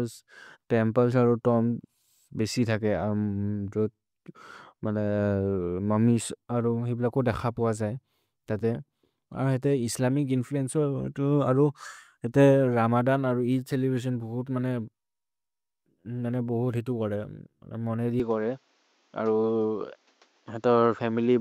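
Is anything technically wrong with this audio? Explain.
Yes. At 18.20 s, just after "मने दि", the input likely switched to a poorer device, a narrower-band microphone path with nothing above 7.6 kHz. From there to the end the speech turns duller, with faint new background noise about 40 dB down, no gap, and level unchanged.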